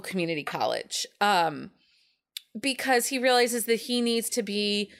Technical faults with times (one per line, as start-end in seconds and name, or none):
none